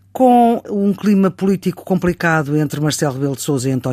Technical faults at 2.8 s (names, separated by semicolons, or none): none